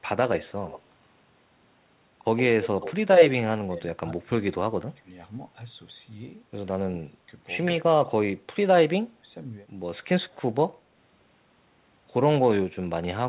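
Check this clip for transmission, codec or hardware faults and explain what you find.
Two faults stand out in this speech clip: an echo leak early on and repeated suppression of the talker during double talk. The audio is band-limited to 4 kHz, which fits a narrowband G.711 call path.

Echo leak, at 0.66 to 0.81 s and again at 2.37 to 2.94 s. Most likely, a far-end canceller let some loudspeaker pickup slip through and returned it. A faint delayed copy trails the speech by 115 ms, about 20 dB down in the first instance. In the second, longer instance it rises to roughly 10 dB below the speech.

Speech suppressed in double talk, at 3.65 to 5.08 s, 6.68 to 7.26 s, 7.81 to 8.51 s and 9.00 to 9.28 s. An echo canceller seems unable to tell the local talker from returned echo when both sides overlap, so it clamps down on everything. The speech dips hard in these spans, by around 20 dB in the first and around 25 dB in the rest. 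The affected time adds up to roughly 0.7 s, 0.5 s, 0.4 s and 0.3 s in the four spans.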